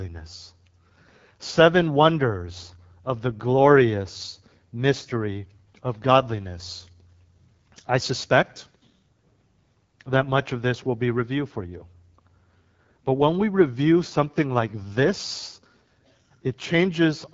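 Throughout, the AMR wideband (HD Voice) codec is plainly audible. Nothing remains above 7.5 kHz. The rough, raspy texture points to a low rate near 8.85 kbit/s.

From 6.08 to 9.07 s, pre-emphasis is left on. The treble boost, fitting a 50 µs FM curve, was never undone. Highs sit about 10 dB too strong, sounding thin and sibilant.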